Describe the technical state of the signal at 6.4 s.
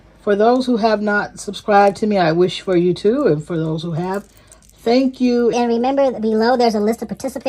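At 6.4 s the sound sits inside a section at the wrong speed, running from 5.53 s to the end at 7.48 s. It plays 1.33 times too fast, likely from a clock mismatch, so pitch rises about five semitones and timing hurries together, unlike a pure pitch shift.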